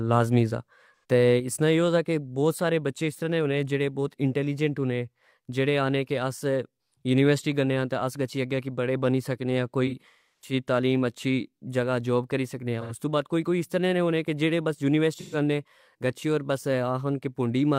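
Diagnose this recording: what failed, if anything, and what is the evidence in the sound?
Codec stage: AAC frame loss with concealment at 0.97–1.04 s, 9.86–10.53 s, 12.81–12.92 s and 15.16–15.36 s. Short gaps become smeared, phasey patches. The 9.86 s event spans about half a second with a run of roughly 300 ms, decaying toward silence before fading back.

At 1.4 s the speech and background noise drop together by about 5 dB in a single step, holding that lower level to the end. This sudden gain jump is likely a digital gain change in processing applied without a ramp.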